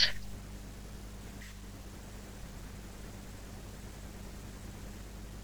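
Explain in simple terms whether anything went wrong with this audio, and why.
Something did go wrong. A steady low buzz called mains hum runs under the speech from start to finish. It sits at 50 Hz, the pitch of the power line. Electricity from a ground loop or nearby transformer leaked into the signal. The hum is strong, nearly as loud as the speech.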